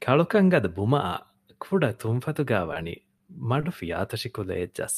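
Short stalls from a late packet occur at 2.73–2.76, 3.17–3.20 and 3.60–3.63 s. Each time the jitter buffer ran dry, the receiver held the last speech sound for 20 ms, then resumed exactly where it stopped. Unlike packet loss, nothing is skipped; the speech is just pushed 20 ms later.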